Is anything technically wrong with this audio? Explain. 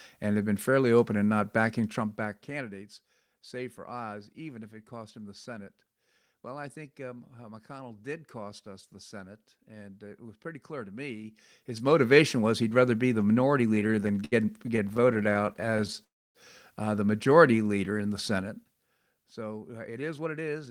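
Yes, the audio has five faults, all in the last seven seconds.

From 13.75 to 16.00 s, just after "rather be the minority", there are repeated stalls (stutter). Packets kept arriving late or more slowly than they were being played, so the receiver's jitter buffer ran dry again and again. Each time it stretched the last sound to cover the wait, 37 times in all, with the longest fill about 68 ms. Roughly 19 percent of that stretch, about 0.43 s, is filled-in sound rather than new audio. Almost nothing is lost, but the speech drags and stutters in small hitches.

From 16.04 to 16.37 s, right before "uh the", there is a call audio freeze. The flow of packets stopped for about 0.3 s, most likely because they were held up in transit. The buffer emptied, and the receiver extended the last sound briefly before fading into about 0.27 s of near-silence. When the audio resumes it carries on from where it stopped, so a pause has been inserted and the playback now runs about 0.3 s later than before.

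From 17.51 to 18.11 s, after "uh the", comes a jitter buffer slow-down. With the buffer running low, the receiver rebuilds its reserve by repeating single pitch periods and small slices of pauses many times over. This adds 95 ms to the passage and plays it at about 85 percent speed. The pitch stays the same while the sounds are drawn out.

From 18.34 to 19.00 s there is zipper noise. A level cut of roughly 10 dB is applied in coarse steps of about 2 dB each, around ten steps per second, with no smoothing between them. Each jump is an abrupt change in the waveform and leaves a small click. Together they form a ticking, zipping texture riding on the speech while the level falls.

From 19.88 to 20.69 s there is a jitter buffer speed-up. The buffer now holds more audio than it aims for, so the receiver trims short pieces of one or a few pitch periods, many times in a row. Roughly 0.1 s is removed, and this stretch plays at about 110 percent speed. 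The pitch is unchanged, but the speech sounds hurried.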